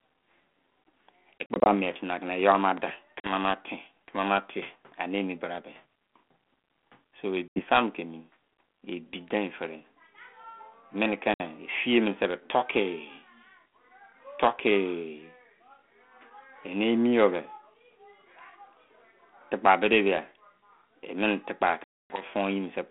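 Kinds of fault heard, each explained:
Packet loss on an ADPCM call: Lost packets leave hard-edged silent holes. The decoder then falls out of step, so speech returns briefly slightly distorted.
Loud pop: Two sharp pops near 2.8 s stand a few dB above the speech, which carries on underneath. Likely an electrical or driver glitch.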